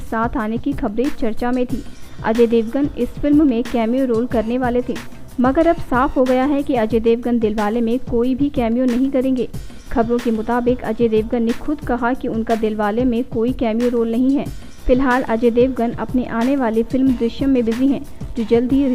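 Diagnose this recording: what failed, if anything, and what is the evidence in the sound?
Nothing stood out on listening that would point to a failure at any stage of the chain.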